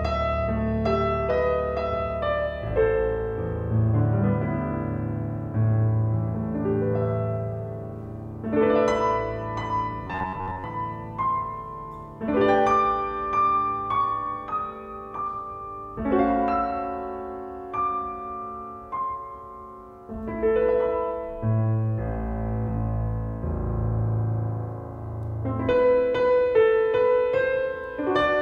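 From 10.07 to 10.64 s there is robotic sound from repeated short buffers: a rigid metallic buzz at 93.8 Hz, likely because audio arrived too seldom and an 11 ms chunk was looped through most of the span. Unlike mains hum, it stops once fresh audio resumes.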